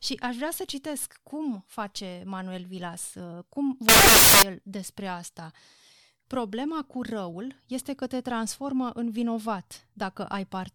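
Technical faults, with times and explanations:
3.89 to 4.42 s, samples built from the wrong bytes: right after "uh cum", the speech turns into a loud, harsh burst of broadband noise that stops abruptly before "el despre asta". Each sample is put together from misaligned or swapped bytes, so the fast-changing low-order bits take the high-order place and set the value. Unlike clipping or a codec glitch, the speech is replaced by harsh broadband noise.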